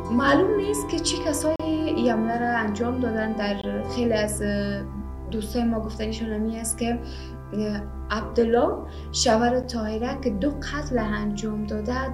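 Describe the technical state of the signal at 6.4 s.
At 6.4 s the signal is intact, with no dropout, distortion, glitch or other audible fault at that moment.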